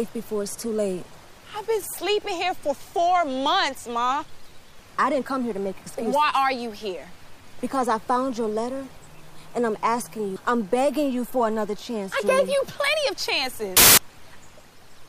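A sudden burst of loud, harsh broadband noise takes over from 13.77 to 13.98 s, about 0.2 s. These are samples built from the wrong bytes: the reader misassembled each sample's bytes, so the rapidly changing low-order bits landed in the high-order position and swamped the sound.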